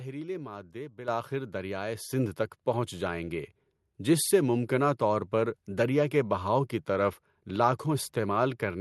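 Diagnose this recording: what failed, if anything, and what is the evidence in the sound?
The call software's automatic gain control raised the microphone's input volume in discrete steps, a microphone volume stepped up fault at the call-processing stage. Speech and background noise jump together by about 9 dB at 1.08 s, then about 4 dB more at 2.1 s, just before "تک پہنچ جائیں گے".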